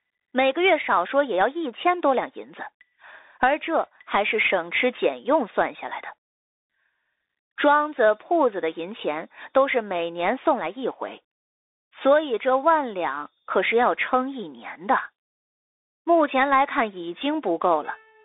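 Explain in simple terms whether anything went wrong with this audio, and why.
The speech has been through a Bluetooth CVSD headset codec from start to finish. Everything above about 3.8 kHz is gone and the band is narrowed to roughly 300 to 3,700 Hz, so it sounds thin. The crude one-bit coding makes s sounds scratchy and leaves a grainy hiss.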